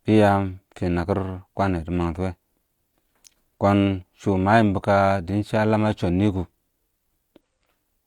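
At 7.40 to 7.42 s, close to the end of the speech, a short burst of damaged data in the compressed stream breaks the audio. For about 20 ms the decoder receives corrupted frame data it cannot parse correctly, loses sync and hunts forward for the next valid frame header before playback recovers. The result is a brief glitch that replaces the speech at that point.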